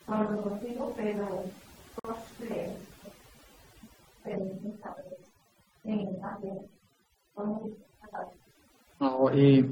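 From the start, the speech carries overdone noise removal: a noise reducer set far too strong has shut off individual frequency bands near its noise estimate, leaving near-silent background with twinkling specks, unlike codec artefacts, which stay tied to the signal.

At 2.00 s a silence of about 50 ms opens and closes at 2.05 s, a gap at a join of encoded pieces. Encoder start delay and end padding were left in. Nothing is lost, so the sound resumes exactly where it stopped, unlike a dropout, which skips material.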